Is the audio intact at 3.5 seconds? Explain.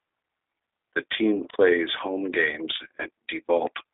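No. At 3.5 s, as throughout the speech, G.729 codec damage is plainly audible. The sound is rebuilt from a vocal tract filter, a pitch predictor and sparse pulses, which fits an 8 kbit/s link. The band runs from 250 Hz to 3.7 kHz, so it sounds thin, rough and slightly synthetic.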